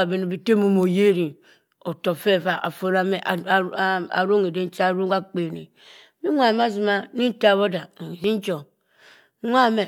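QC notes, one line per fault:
2.60 s and 8.24 s, dropped buffer (overrun): two points where the speech jumps forward with no gap. About 20 ms of audio is missing at each point, likely because the capture buffer was overwritten before it was read, leaving the surrounding sound joined directly.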